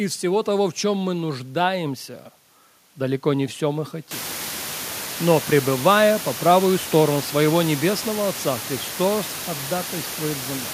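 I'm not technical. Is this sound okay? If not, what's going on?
Yes, nothing has gone wrong with how this speech was recorded or played back. The background noise of the room gets noticeably louder at about 4 seconds in, but it stays well under the voice and is simply part of the space where the microphone was.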